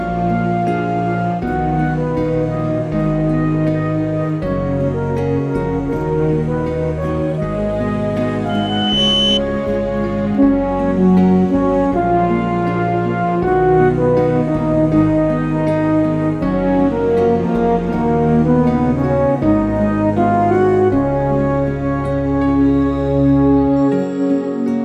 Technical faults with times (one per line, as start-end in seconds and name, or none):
8.49-9.41 loudspeaker feedback squeal